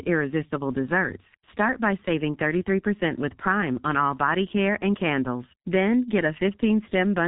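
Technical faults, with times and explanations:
Throughout, G.723.1 codec: heavy low-bitrate compression, likely around 6.3 kbit/s, removes everything above 3.8 kHz, leaving the speech muffled, hoarse and with smeared consonants.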